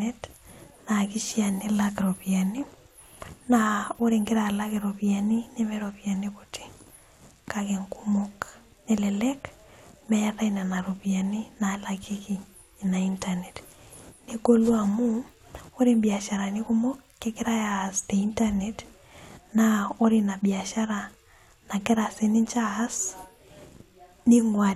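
A speech recording with nothing technically wrong in it, so there are no times or causes to give.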